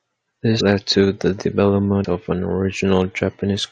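At 2.03 s, just before "of an", compressed frames are skipped. About 70 ms of speech vanishes, roughly three 23 ms frames. The audio jumps ahead by that much.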